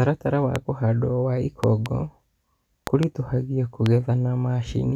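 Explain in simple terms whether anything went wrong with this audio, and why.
Loud pops hit the speech at 0.56 s, just before "kũhandwo wa"; as a double pop from 1.64 to 1.88 s, after "wa kũhandwo wa"; as another double from 2.87 to 3.05 s; and once at 3.86 s. Each is much louder than the speech, which continues underneath. Likely cause: sudden electrical jolts from a plug, switch or static.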